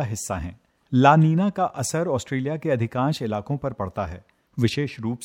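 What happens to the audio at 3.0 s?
At 3.0 s the clip is in the middle of a run of clock slip clicks lasting from 0.16 s to 5.17 s. Two devices were likely running on unsynchronised clocks, roughly 300 ppm apart, so a single sample is dropped or repeated each time the drift adds up to a whole sample. That happens about every tenth of a second, around fifty times in all, and each slip is a small regular tick in the speech.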